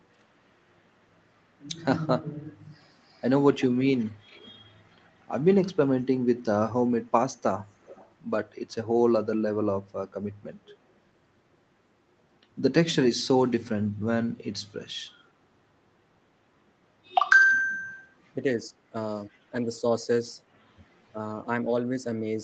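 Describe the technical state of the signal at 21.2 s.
Speech suppressed in double talk runs from 21.11 to 21.71 s. The speech dips by roughly 10 dB and thins in patches adding up to around 300 ms, likely because an echo canceller could not separate the talker from overlapping far-end echo and attenuated both.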